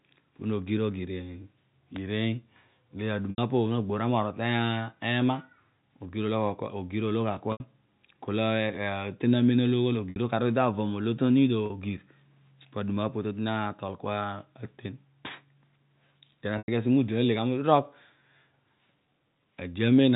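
Speech with five brief held, buzzy stretches, the longer ones fading into silence, at 3.3, 7.52, 10.1, 11.66 and 16.58 s (the last just before "asi mo"), lasting 40 to 100 ms. This is packet loss with pitch repetition: the receiver loops the last pitch period across each gap, consistent with 20 ms packets, over the narrowband G.711 telephone path.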